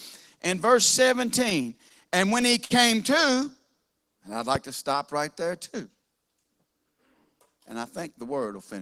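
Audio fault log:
1.39–2.72 s, repeated stalls (stutter): the speech keeps catching for a moment, eleven times, because packets came in late and the buffer ran dry. Each hiccup gets filled by stretching the last sound, 148 ms in all, longest 53 ms. Nothing's lost; it just drags.
3.35–3.73 s, jitter buffer slow-down: right before "and I'd" the speech slows to 92% speed with the pitch unchanged. The buffer was low or had just raised its target delay, so it repeated single pitch periods to build a reserve, adding 40 ms and drawing the sounds out.
4.55–4.58 s, loud pop: between "and I'd" and "to stop right there" there's one sharp pop sitting about 10 dB above the speech, which carries on underneath. That's likely a sudden voltage spike from a plug, switch, static discharge or driver glitch.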